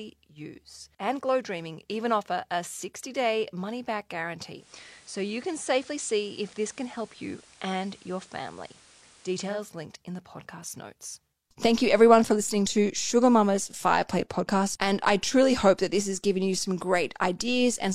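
From 4.52 to 9.63 s, the receiver lost the digital signal, digital radio blending to FM analogue: faint hiss rises, level shifts about 2 dB.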